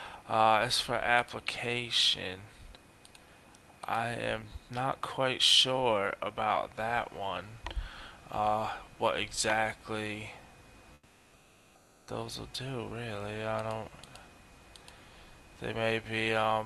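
From 10.93 to 12.07 s the real background gives way to steady, featureless comfort noise about 5 dB quieter, likely discontinuous transmission (Opus DTX) filling a pause.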